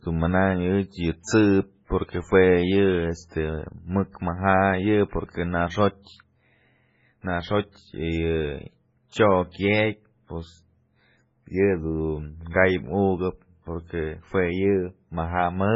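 Across the whole recording the speech has nothing above 7.6 kHz, and the remaining band sounds watery and swirly, with heavy smearing and metallic chirps on s sounds. This is most likely MP3 compression, and the damage fits a very low bitrate of around 16 kbps. Starved of bits, the encoder cuts the treble at a fixed point and drops weaker frequency lines that flicker on and off from frame to frame. That flicker produces the swirling texture.

At 1.85 to 1.90 s a pre-echo appears: a hiss runs for about 48 ms ahead of a sharp onset, and the onset itself lands soft and blurred. The codec spreads its quantisation noise evenly over a transform block. Because this attack sits late in its block, noise scaled to the loud part also fills the quiet stretch before it. That is why the hiss is heard before the attack rather than with it.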